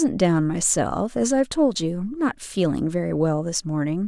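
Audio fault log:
No faults detected anywhere in this speech recording.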